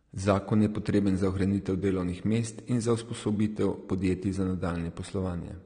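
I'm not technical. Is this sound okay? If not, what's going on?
No. AAC compression is audible throughout the speech, likely from a low-quality encoding that drops everything above 9.7 kHz, making it sound dull, smeared and fizzy.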